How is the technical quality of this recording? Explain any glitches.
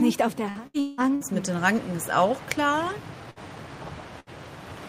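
The quality is held back by packet loss: one choppy stretch early on and two short dropouts near the end.

From 0.49 to 1.24 s there's repeated packet loss, giving a robotic sound. Four holes, the longest about 180 ms, get patched by stretching the previous sound. Nearly half that stretch is fill, so it comes across choppy and robotic with pieces missing.

Then there are bursts of packet loss at 3.31 to 3.39 s and 4.20 to 4.29 s, each dropping about 60 ms. The receiver carries the last sound forward while fading it, so you get a brief held buzz or dying hiss before the audio jumps ahead.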